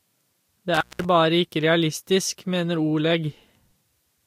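A speech recording with an intermittent contact between 0.74 and 1.05 s: a loose cable or plug briefly opens the signal path, and the sound drops out for about 188 ms with crackle at both edges. On the waveform this shows as a near-flat gap bracketed by sharp spikes. On a spectrogram, thin vertical broadband streaks mark the crackles on either side of a dark band containing a faint hiss floor.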